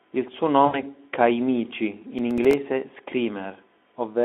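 At 0.66 s the speech hits VoIP packet loss concealed by the speech codec. Roughly 80 ms went missing, which fits about four 20 ms frames, and the decoder bridged it by extrapolating its last pitch and filter into a buzzy, fading tone, with the sound still weak just after 0.80 s.

From 2.19 to 2.53 s there's processor overload crackle: a handful of very short buffers, around 3 ms each, weren't finished in time and dropped to silence. Those tiny hard-edged gaps pile into a gritty tearing over the telephone-narrow Speex sound.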